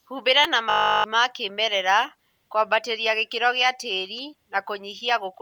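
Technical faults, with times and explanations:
Throughout: Bluetooth LC3 compression. The speech has a plainly audible breathy, grainy edge, likely from LC3 coding at a rate that fits 48 kbps with 10 ms frames. Upper bands get zeroed and noise-filled, so a spectrogram shows smeared, blocky high-frequency texture in 10 ms steps.
0.44 s: electrical switching spike. A sharp snap sits on top of the speech, lasting under 10 ms. It is likely a nearby switch or static arc picked up by the line. The waveform shows a narrow spike, and the spectrogram shows a thin full-height vertical stripe.
0.70 to 1.04 s: system hang loop. A 20 ms fragment repeats 17 times, giving a steady 50 Hz buzz while the output buffer cycles during a freeze. Roughly 0.3 s of speech is lost before "ma kĩmerera kũambatĩria gĩkĩro". The waveform looks identically periodic, and the spectrogram shows harmonic lines at 50 Hz spacing.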